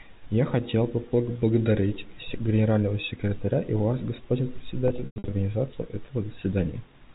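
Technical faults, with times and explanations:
0.54 to 7.04 s, word clock ticks: the receiving device runs on its own clock, off from the sender's by around 40 parts per million, so roughly every half second the two slip and a single sample is dropped or repeated. About fifteen sharp ticks of uneven strength result.
4.88 to 5.32 s, packet loss with pitch repetition: about 260 ms of audio went missing in scattered losses across 440 ms. The receiver filled each gap by repeating the last pitch period, so the shorter losses come out as a brief buzzy hold, while the longest, 100 ms, fades toward silence before the speech cross-fades back in.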